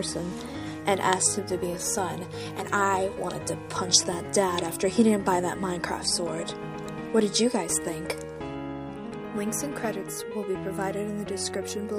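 No technical faults are audible.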